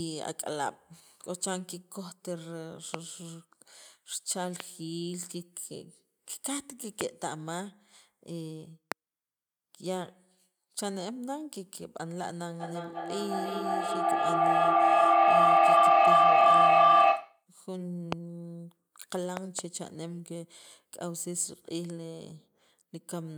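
From 12.6 s to 17.5 s a piercing tone near 1 kHz swells over the speech, peaking about 15 dB louder than the talker and throbbing roughly every 300 ms. This is feedback howl: two devices in the same room were joined to one call, so sound from a loudspeaker re-entered a microphone and returned louder on each pass. The loop favoured the region around 1 kHz, the pulsing follows its round-trip delay, and the howl stops when the loop is broken.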